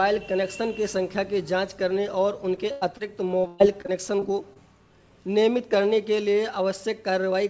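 Short concealed packet loss appears at 2.56 to 2.59 s and again at 2.97 to 3.01 s in this call audio, which has nothing above 8 kHz, consistent with a wideband codec such as G.722. Each time about 20 ms of the stream arrived too late to decode. The receiver covered the hole by extending the last sound, following its pitch or as shaped noise, and then blended back into the real signal, leaving a brief smear or wobble. A burst of packet loss sits between them at 2.71 to 2.83 s. Here about 100 ms went missing in one stretch. The concealment carried the previous sound forward while fading it, so it becomes a held buzz or dying hiss, and the audio then picks up further along with that portion gone. Repeated packet loss (robotic sound) runs from 3.41 to 4.57 s. Six separate gaps strike in quick succession, the longest 124 ms, and together they remove about 220 ms, so roughly a fifth of that span is synthesized fill. 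Because each patch ends only shortly before the next loss begins, the sound turns choppy, with chunks dropped throughout.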